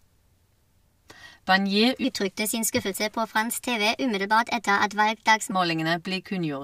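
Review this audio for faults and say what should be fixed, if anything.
From 2.04 s to 5.52 s, a section at the wrong speed plays 1.21 times faster than recorded. The speech becomes hurried and rises about three semitones, with pitch and tempo shifting together abruptly at both boundaries. The likely cause is that this segment was resampled or played against a mismatched clock. To prevent it, confirm that every segment's sample rate matches the project rate before editing and rendering.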